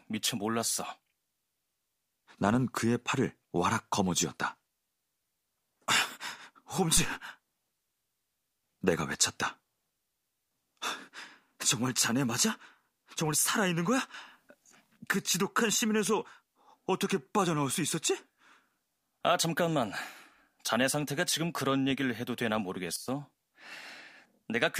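At 6.97 s there's a phantom power thump, a deep low thud from a supply switching on a live input. The step pushes through the coupling capacitors and dies away in about 37 ms, ending by 7.14 s. Then from 14.14 to 14.97 s the speech and its background noise jump up about 6 dB together, and from 22.96 to 23.08 s they drop about 12 dB. Both are likely a sudden gain jump, a digital gain change applied without a ramp.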